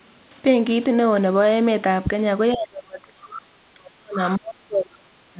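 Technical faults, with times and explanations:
2.54–4.19 s and 4.36–5.4 s, speech suppressed in double talk: the echo canceller likely mistook overlapping far-end talk for echo and attenuated both, so the speech dips by up to about 35 dB, within a band already capped at 4 kHz by the call codec.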